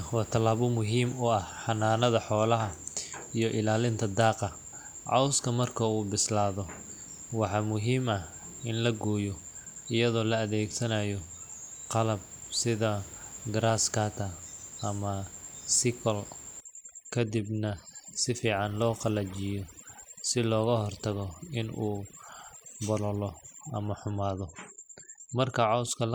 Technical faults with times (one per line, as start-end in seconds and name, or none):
16.60-26.14 overdone noise removal